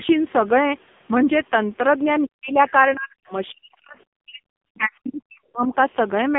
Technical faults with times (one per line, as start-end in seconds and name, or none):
0.00-6.38 AMR narrowband mobile codec
2.25-2.58 speech suppressed in double talk
2.67-2.71 other side's voice leaking through
2.95-4.42 speech suppressed in double talk
4.76-5.74 speech suppressed in double talk